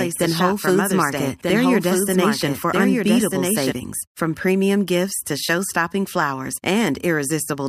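A doubled audio track runs from the very start of this speech clip until 3.72 s, where the second copy cuts off abruptly. The same speech is heard twice, with a full-band copy trailing the original by roughly a second and a half and sitting around 5 dB quieter. It carries no decay or room colour, so it sounds like a clean overlapping repeat rather than an echo. The likely cause is the signal being captured a second time through a slower path.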